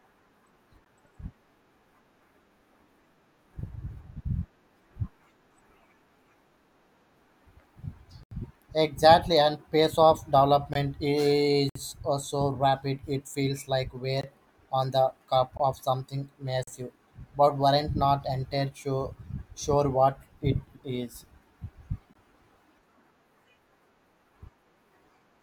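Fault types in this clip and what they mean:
Block of digital silence: eight spots where the speech drops straight to silence and back, from a brief tick to an 80 ms hole near 8.2 s.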